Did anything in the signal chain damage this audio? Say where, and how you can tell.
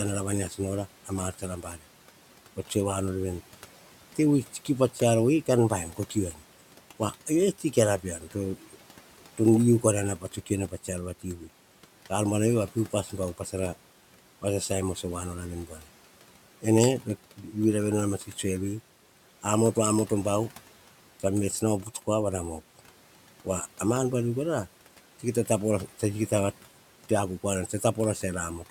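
Yes. Speech cut by the noise suppressor, a call-processing fault, at 0.5–1.83, 4.15–6.38, 7.12–8.76, 9.38–11.48, 15.67–15.84 and 16.62–17.55 s. Quiet speech sinks by about 8 to 12 dB, sounding swallowed, because the suppressor treated it like the room noise about 22 dB below.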